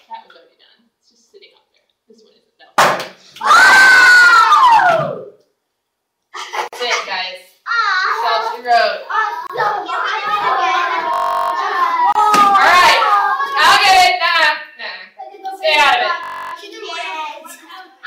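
At 6.68 to 6.73 s the sound drops out for 48 ms. Shorter silences follow at 9.47 to 9.50 s (28 ms) and 12.12 to 12.15 s (29 ms). These are gaps at a join of encoded pieces: each segment was encoded on its own, and the encoder's start-up delay and last-frame padding were left in when the pieces were joined. The edges are abrupt but slightly softened, and the audio picks up exactly where it stopped. What marks them is a silent gap or deep dip, with nothing repeated.

From 11.14 to 11.52 s, and again from 16.24 to 16.53 s, a system hang loop replaces the sound with a steady buzz. The machine froze while the audio hardware kept replaying one 21.33 ms slice of its ring buffer, which fits a 1024-sample buffer, so the loop repeats at 46.9 Hz. That rate is too fast to hear as a stutter and comes across as a tone. Afterwards the audio resumes with almost nothing missing. Unlike the join gaps, these sections are filled with repeated sound rather than silence.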